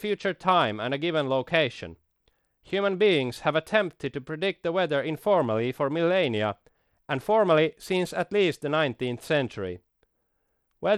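Throughout the speech the treble flickers in and out, with a gritty noise riding on the sound. This points to likely Bluetooth SBC compression at a low bitrate, around 96 kbps. The coarse, hearing-blind bit allocation starves the upper sub-bands, so the top end flutters rather than being cut off cleanly as a simple low-pass filter would.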